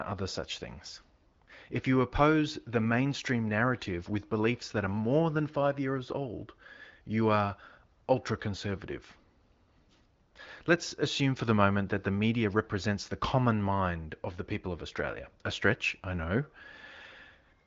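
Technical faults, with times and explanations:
No technical faults detected.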